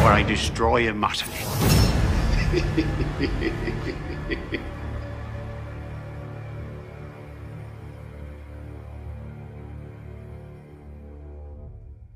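Compressed frames skipped at 7.56 s: a single compressed frame, about 20 ms of audio, never reaches the output, because it is either absent from the stream or was rejected by the decoder as corrupt. Playback jumps forward by that one frame length, leaving a small jump in the sound.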